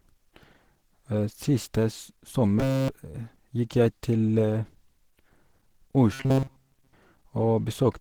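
Throughout the clip, the speech carries the texture of Opus compression at a low rate. It sounds hoarse and muffled, and tonal parts of the voice turn grainy and rough. That points to the encoder running in its hybrid speech mode, which fits a bitrate around 16 kbps. Content still reaches about 20.2 kHz, so the damage comes from coarse coding within the bands rather than a narrowed bandwidth. The cause is likely this codec.

From 2.59 to 2.89 s, and again from 6.13 to 6.93 s, the voice collapses into a rigid metallic buzz at 134 Hz. This is robotic sound from repeated short buffers. Playback likely ran short of fresh audio, and a slice of about 7.5 ms was replayed over and over while the real signal was skipped. In both stretches essentially all of the audio is repeated material.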